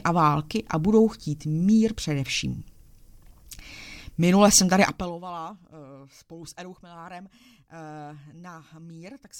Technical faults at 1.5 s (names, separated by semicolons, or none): none